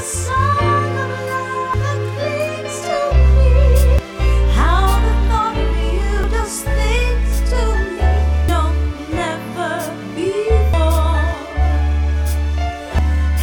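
Abrupt skips at 1.74, 3.99, 6.24, 8.49, 10.74 and 12.99 s, each dropping roughly a third of a second: audio missing between chunks, likely from 2.5 s recording blocks.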